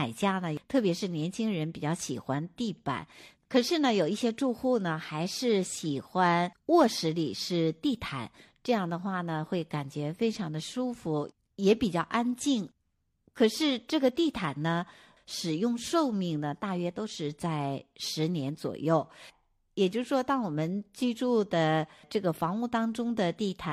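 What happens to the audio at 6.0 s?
Nothing goes wrong at 6.0 s: the speech there plays through intact, with no dropout, click or distortion.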